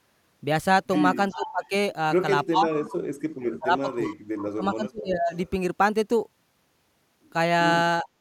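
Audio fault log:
1.29–1.67 s, 4.04–4.16 s, 5.35–5.50 s: echo leak. A faint copy of the speech returns 372 ms late, about 15 to 30 dB down. The likely cause is loudspeaker echo slipping past the canceller.
1.34–1.72 s, 2.50–2.73 s, 3.37–4.02 s, 4.38–5.31 s, 8.03–8.07 s: speech suppressed in double talk. The speech dips or breaks up, by up to about 35 dB. The canceller likely ducked it while both sides spoke.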